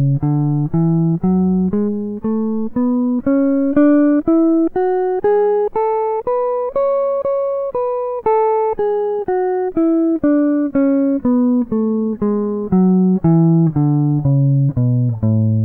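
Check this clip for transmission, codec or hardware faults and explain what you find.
Clock slip clicks run from 0.34 s to 15.42 s. The likely cause is two devices on unsynchronised clocks that differ by a few tens of parts per million, so one sample is dropped or repeated about once a second. The result is around twenty faint, evenly spaced ticks through the music.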